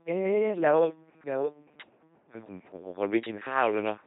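The speech has been passed through an LPC-10 vocoder for its full length. The coder keeps only a filter of up to ten poles for the vocal tract and excites it with either a pulse train or noise, deciding each moment is fully voiced or fully unvoiced. The result is a heavily damaged, buzzing, mechanical robot voice, with stray buzz or hiss where that voicing choice misfires. Nothing survives above 3.9 kHz, and the coarseness points to a rate around 2.4 kbit/s.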